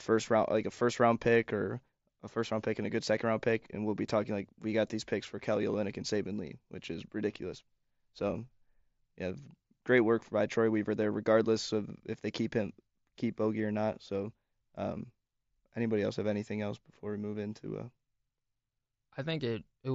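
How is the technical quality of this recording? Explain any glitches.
The speech shows no glitches or dropouts, and what you hear is the expected sound of a Bluetooth mSBC headset link, with the band limited to about 8 kHz and only light coding texture.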